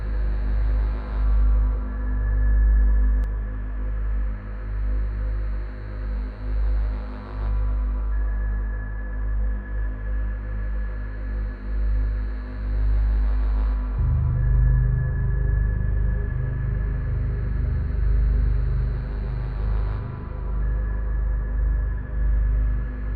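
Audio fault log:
0.00–3.24 s, doubled audio track: a slower second capture path is likely mixed in, so a somewhat quieter copy trails about a fifth of a second behind, then cuts off abruptly.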